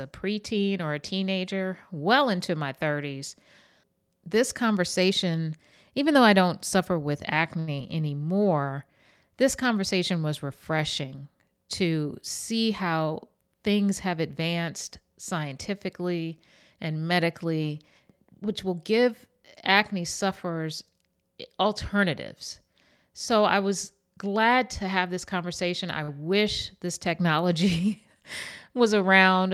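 At 7.59 s, just after "I don't suffer with", a short stall from a late packet holds the last sound for about 80 ms until the packet arrives, then resumes where it left off. It sounds like a slight drawn-out buzz or dip, but no speech is lost.

Right after, at 7.76 to 7.79 s, a short concealed packet loss drops about 20 ms of audio that never reaches the decoder. The receiver bridges it with a 14 ms guess, giving a quick smear or wobble. Unlike the stall, real sound is missing here.

From 12.51 to 13.55 s, between "conversation was refreshing to" and "things have advanced scientifically", a jitter buffer speed-up trims pitch-period slices to cut excess delay, roughly a tenth of a second in total. Speech runs about 8% faster and sounds hurried, but the pitch stays the same.

At 26.03 s, between "have this conversation I" and "wish this technology", another late-packet stall stretches the sound for about 47 ms, with nothing lost.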